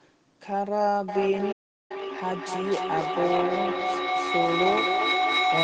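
A speech recording with a feedback echo between two devices from 1.08 s to the end. Each phrase returns at a steady interval of roughly 0.3 s, growing thinner and more ringing, and the repeats peak at about 2 dB above the speech itself, so they pile up instead of fading. That fixed spacing of distinct copies sets it apart from room reverberation, which smears continuously. From 1.52 to 1.91 s a playback stall leaves about 380 ms of silence in mid-flow before the sound carries on. The gap is far longer than the few milliseconds a lost packet would cost, which points to a player that likely ran out of buffered data or had its thread blocked.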